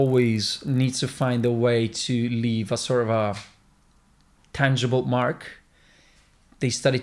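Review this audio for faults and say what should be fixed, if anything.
From 0.0 to 1.5 s the sample-rate converter, taking the audio from 48 kHz down to 24 kHz, was resampler restarted on every block: each 20 ms block was converted without the samples on either side of it, leaving a small error at every block edge. With blocks this short, those errors form a 50 Hz buzz riding on the speech. Keep the resampler's state running continuously across block boundaries.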